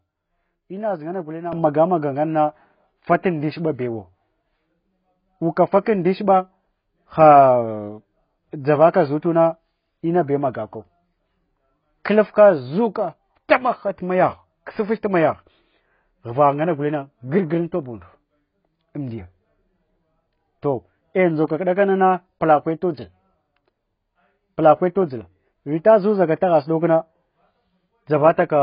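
A speech recording carrying heavy damage throughout, most likely from AAC compression: the spectrogram shows nothing above 5.1 kHz, with patchy, holed bands beneath. The result is dull, smeared speech with warbling, fizzy sibilants, which points to an AAC-LC encode at a very low bitrate, around 16 kbps. At 1.53 s a sudden gain jump raises speech and background noise together by about 10 dB and stays raised to the end. The waveform envelope steps up abruptly there, likely from a gain change applied without any ramp.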